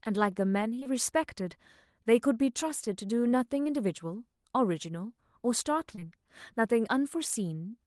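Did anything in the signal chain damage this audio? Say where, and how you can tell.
Yes. The damage happened in the network stage, and it is short concealed packet loss. Brief smears and wobbles land at 0.79 and 0.83 s, at 3.63 s, and at 5.95 and 5.99 s. Each gap replaces about 20 ms of speech. The paired losses run back to back, so those two spots smear for about 80 ms. The packets reached the decoder too late. The receiver stretched the preceding sound to cover each hole, then blended back into the real audio.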